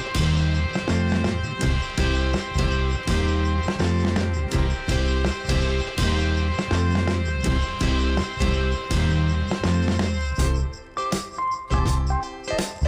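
No technical faults are audible anywhere in the clip.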